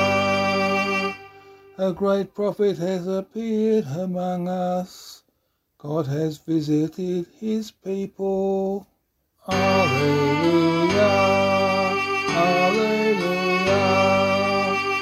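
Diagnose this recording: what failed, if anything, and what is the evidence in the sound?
Nothing failed here: listening through, there's no point where any stage from the wiring to playback gives itself away, so there's no fault to diagnose.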